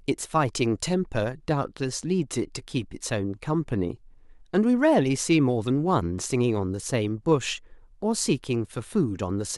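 No technical faults can be heard anywhere in this speech recording.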